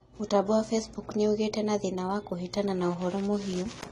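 From start to end the speech is band-limited, with nothing above about 12.1 kHz, and it has a dull, smeared, fizzy texture on sibilants. That's likely AAC compression at a low bitrate, something like 32 kbps, starving the high bands.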